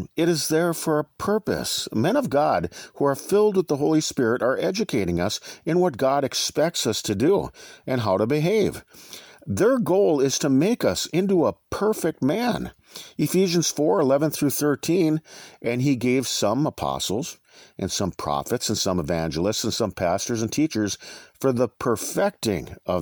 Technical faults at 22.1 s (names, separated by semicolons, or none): none